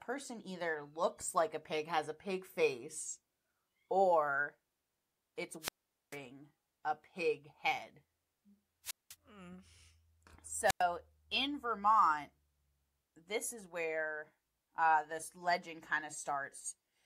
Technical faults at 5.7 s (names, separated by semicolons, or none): wireless microphone squelch dropout